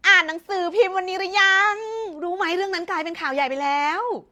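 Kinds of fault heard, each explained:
No technical fault can be heard anywhere in this speech recording. Careful listening turns up nothing that calls for an entry.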